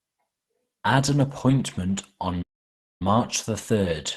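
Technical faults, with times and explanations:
2.42–3.02 s, playback stall: The player most likely ran short of buffered data or had its output thread blocked just after "an appointment on", so nothing reached the output for roughly 0.58 s. The sound cuts off abruptly mid-flow, leaving a hard gap of silence, and then resumes once the player recovers. Through the call-codec path the audio keeps its coded, band-limited quality on either side of the gap.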